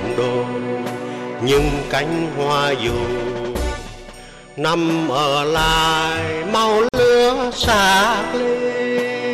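At 6.89 s the sound cuts out for 49 ms, returning at 6.94 s. This is a gap at a join of encoded pieces. Separately encoded sections were joined untrimmed. Encoder start delay and last-frame padding remain as silence. The sound resumes where it stopped.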